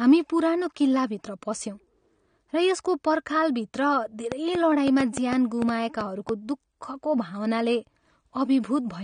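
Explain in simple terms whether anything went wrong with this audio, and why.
Yes, two things. Throughout, the speech sounds dull and smeary, with nothing above about 9.7 kHz, likely from heavy AAC compression squeezing the file too small. From 4.32 to 6.30 s there's a train of clicks: around ten uneven ticks, about 4.6 a second, likely interference or a faulty connection.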